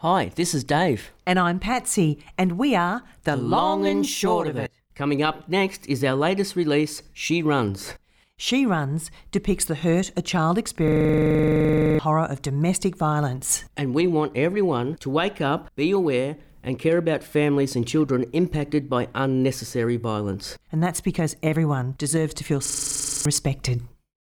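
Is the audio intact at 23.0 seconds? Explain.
No. From 22.66 to 23.25 s, a system hang loop replays one identical 42.67 ms buffer fourteen times. That gives a 23.4 Hz machine-gun stutter, not a silent dropout.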